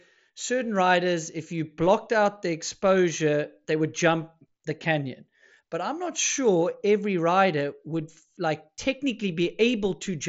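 Nothing stood out on listening to this speech.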